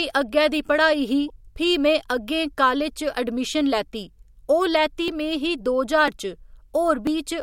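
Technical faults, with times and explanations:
1.28 to 1.30 s, corrupt frame decoded: Bit errors damaged a couple of compressed frames, and the decoder played them anyway. Misread gains and codes put energy at the wrong frequencies for those few milliseconds, so a short chirpy blip cuts through the speech.
5.08 to 7.07 s, periodic USB or driver dropouts: Something blocked the USB bus or audio driver about once per second, and each time roughly a millisecond of audio was skipped. The speech jumps across each gap, leaving a few evenly spaced small ticks.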